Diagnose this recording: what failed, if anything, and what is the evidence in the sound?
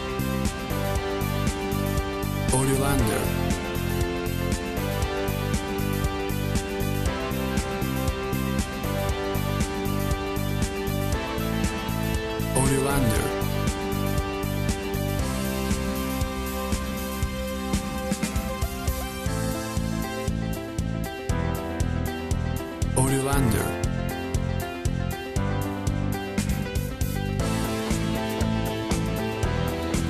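Nothing failed: no stage in the chain, from analogue wiring through to playback, leaves an audible mark anywhere in the recording.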